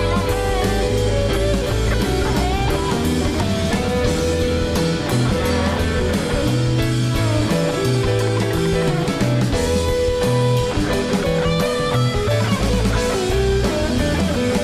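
No technical faults can be heard anywhere in the recording. Nothing interrupts or disturbs the audio at any point.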